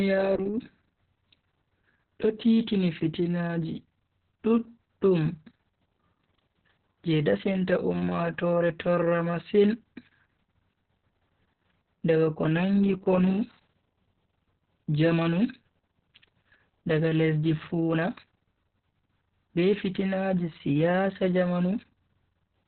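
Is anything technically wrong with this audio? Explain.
Yes. Opus voice compression runs throughout the speech: the linear-prediction SILK coder has fallen back to narrowband, with nothing above 4.3 kHz, and coarsely coded excitation. The heavy damage, muffled, hoarse and slightly robotic, fits a very low bitrate around 6 kbps.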